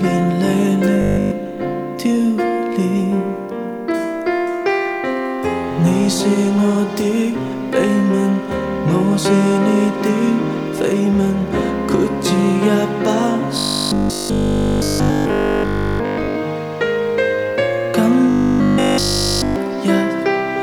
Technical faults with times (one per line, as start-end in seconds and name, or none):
1.01-1.31 robotic sound from repeated short buffers
13.58-16.36 robotic sound from repeated short buffers
18.30-19.56 robotic sound from repeated short buffers